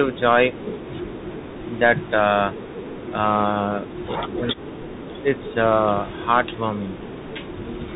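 Throughout the clip the speech has passed through a Bluetooth CVSD headset codec, a narrowband link that codes each sample as a single up-or-down bit and adapts its step size as it goes, which fits a 64 kbps stream. Everything above 4 kHz is gone, leaving a boxed-in, telephone-like sound. The step cannot keep pace with loud, bright passages, so they distort. Sibilants come out scratchy, and a granular hiss sits beneath the speech.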